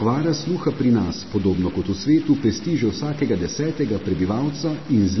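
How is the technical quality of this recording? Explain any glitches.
The technical quality is poor. Two faults run through the whole recording: a constant bit-level distortion and heavy lossy-codec damage.

Stuck bit (throughout): A distortion sits on the speech from start to finish, and the pauses between phrases fill with noise instead of going quiet. This is likely a stuck bit, where one data line or converter bit is held at a fixed value. About half of the samples are then shifted by that bit's weight in a pattern that follows the waveform. The result is added grain or buzz. Near silence, small values crossing zero flip the bit's effect, so the gaps carry noise.

MP3 compression (throughout): The speech sounds watery and swirly, with smeared consonant onsets, and nothing is present above 5.9 kHz, so the top end is dull. The damage is heavy and fits a low bitrate of around 24 kbps. 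The likely cause is MP3 encoding. At a low bitrate the encoder drops weaker frequency lines, which come and go from frame to frame, and it cuts the treble at a fixed point, which accounts for the missing highs.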